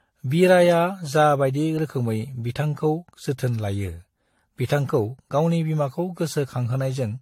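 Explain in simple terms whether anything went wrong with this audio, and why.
From start to finish the speech sounds swirly, hollow and smeared, with the starts of sounds blurred and nothing above about 16.5 kHz. This is generation loss, likely from the recording being compressed and decompressed about four times, each round adding fresh damage.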